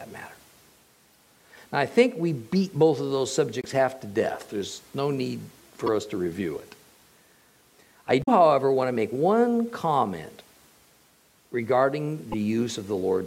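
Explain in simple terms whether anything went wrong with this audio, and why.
Five brief chirps or blips break into the sound at 1.13–1.16 s, 3.61–3.65 s, 5.86–5.89 s, 8.20–8.29 s and 12.32–12.34 s. These come from damaged data in a compressed stream. Small parts of the compressed file were corrupted, so the decoder misread those stretches and lost its place until it found the next clean frame. Each glitch lasts a few hundredths of a second, and the one near 8.2 s is the longest.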